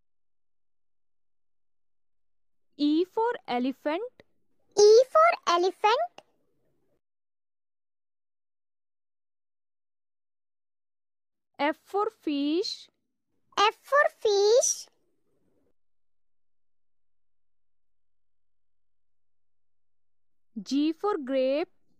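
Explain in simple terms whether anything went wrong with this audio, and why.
Nothing went wrong with this audio that a listener would notice. The sound plays cleanly the whole way, with nothing that breaks its flow.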